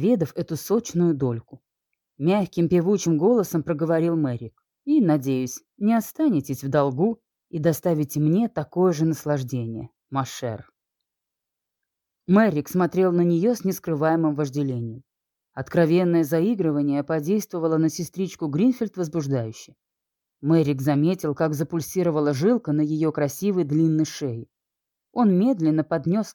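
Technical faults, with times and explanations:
No technical faults can be heard in this clip.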